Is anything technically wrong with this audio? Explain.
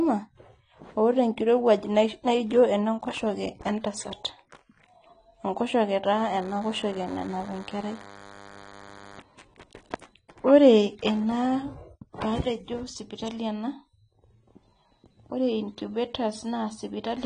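Yes. Across the whole speech clip the sound is dull and smeared, with nothing above 10 kHz and a warbling, fizzy edge on sibilants and held vowels. This is likely AAC compression at a low bitrate, around 32 kbps. At that rate the encoder drops the top of the band and quantises the remaining frequency lines so coarsely that gaps open in the spectrum. On a spectrogram the energy stops at a flat ceiling near 10 kHz, and the area below it shows patchy, blotchy holes.

From 6.06 to 9.19 s there is a DECT cordless phone buzz, a thin, steady buzz sitting roughly 20 dB below the speech. A nearby DECT handset or base sends a radio burst every 10 ms. The audio circuitry rectifies each burst, which produces a 100 Hz repetition rich in harmonics. A spectrogram shows evenly spaced horizontal lines at 100 Hz multiples confined to that span. Zoomed in on the waveform, small regular spikes repeat every 10 ms.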